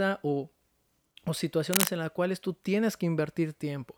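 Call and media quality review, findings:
Cable scratch noise, 1.73–1.89 s: short burst of ragged scratching over the speech, a bit louder than the speech itself. Likely a worn cable or connector being moved, contact resistance jumping around and spraying uneven noise into the line.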